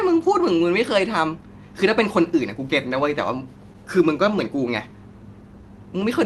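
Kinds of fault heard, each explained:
Scattered short gaps: lost or late packets between 3.73 and 4.72 s were patched by continuing the last sound, leaving about seven brief ticks and smears, the longest roughly 15 ms.
Jitter buffer slow-down: the receiver repeated pitch periods to rebuild its reserve, so 5.23 to 5.70 s runs at 91% speed, drawn out 48 ms at unchanged pitch.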